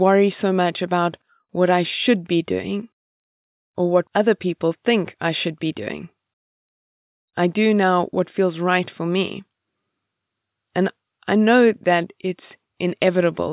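No faults turn up anywhere in the speech recording: no dropouts, no discontinuities, no level or timing anomalies.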